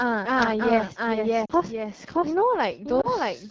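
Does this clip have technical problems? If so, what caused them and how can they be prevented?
Yes. A doubled audio track runs throughout: a second full-band copy of the speech trails about 0.7 s behind at roughly equal level, dry and without decay, unlike an echo or reverb tail. It likely comes from a slower second capture path or an edit holding two misaligned copies. Prevention: route only one capture path into the mix and check edits for duplicated layers.

The AMR wideband (HD Voice) codec is plainly audible: the speech sounds rough and raspy throughout, which points to one of the lowest AMR-WB rates, such as 8.85 kbit/s, rather than a generic bandwidth limit. Prevention: negotiate 12.65 kbit/s or higher.

Lost AMR speech frames cause brief dips at 1.45–1.52 s, which fits two lost 20 ms frames, and at 3.01–3.07 s. The decoder reuses its last settings at falling gain, so these are smoothed dips rather than clicks or hard dropouts. 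Prevention: improve radio coverage or enable stronger channel protection.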